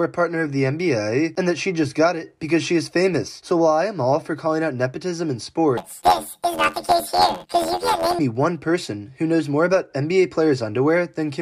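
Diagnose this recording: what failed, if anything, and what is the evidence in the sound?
Planar audio read as interleaved, from 5.77 to 8.20 s, at the sample-format conversion stage. The sound turns into a robotic buzz at about 86.1 Hz with no clear octave shift. Each block of about 11.61 ms, which fits a 512-sample buffer, holds one channel's samples followed by the other's. Read as alternating pairs, each block plays twice at double speed, first left then right, so the overall pace holds. The repeat at the block rate produces the buzz.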